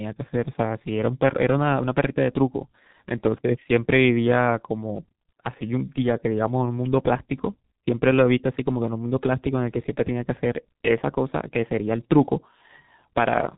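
G.723.1 codec damage runs through the whole clip. The speech is squeezed into long 30 ms frames at a rate that sounds like about 6 kbit/s. Nothing survives above 4 kHz, and the slow-updating voice model leaves it heavily muffled and hoarse, with consonants smeared together.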